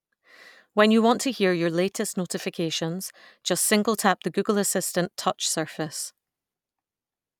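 No technical faults are audible.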